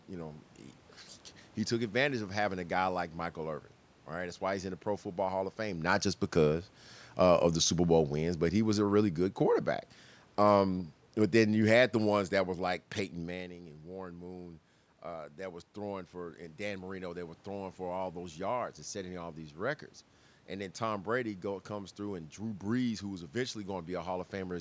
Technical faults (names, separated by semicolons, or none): automatic gain falling